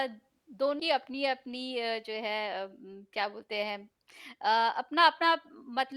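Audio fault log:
0.79–0.82 s, compressed frames skipped: the speech jumps forward abruptly, losing around a fifth of a second of material, which points to a run of roughly twenty consecutive compressed frames either missing from the stream or rejected by the decoder as corrupt. The jump fits a 10 ms frame size.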